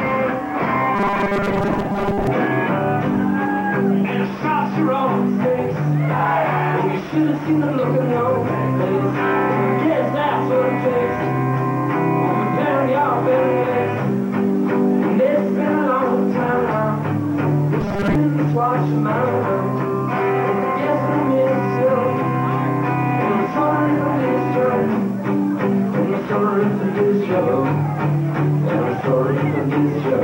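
From 0.96 to 2.27 s, and again briefly from 17.81 to 18.15 s, the sound turns into a rigid, metallic buzz pitched at 200 Hz: robotic sound from repeated short buffers. The likely cause is new audio arriving too seldom, so playback loops the last 5 ms segment to fill most of each gap while real material is skipped. That fixed 5 ms repetition imposes the 200 Hz tone, with the underlying sound only loosely tracked beneath it.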